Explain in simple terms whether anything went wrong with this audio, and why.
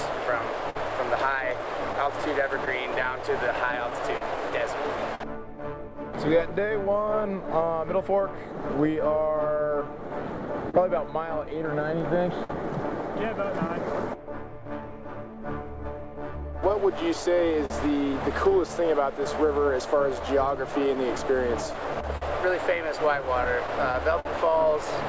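Clock drift between sender and receiver: the sending device's clock ran about 4 percent slow, so the receiver kept running short of audio and had to compensate all through the clip.

Repeated timing corrections: from 2.87 s to 21.85 s the receiver stretched the sound, playing it at 98% speed and adding roughly 0.4 s in total. You may hear this as slight hiccups or an uneven pace.

Scattered short gaps appear from 0.70 to 8.71 s, 10.70 to 13.95 s and 17.66 to 24.27 s. These are brief holes, each around 50 ms at most, that were filled by extending the previous sound. They show up as small ticks or smears.

The call codec itself cuts everything above 8 kHz, which makes the audio a little dull.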